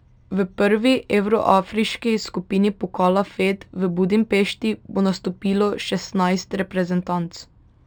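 The recording is speech, and throughout its length it shows imaging from linear upsampling. The material appears to have been raised from a 12 kHz rate to 44.1 kHz by drawing straight lines between samples, a weak interpolation filter. The top of the original band is dulled, and a fainter mirror of the speech spectrum sits at 6 to 12 kHz, roughly 30 dB below the signal, adding a light metallic shimmer to sibilants. On a spectrogram the energy folds back at 6 kHz into a reflected copy above it.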